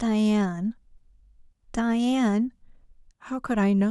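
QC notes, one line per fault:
No faults found in this speech clip; nothing to flag.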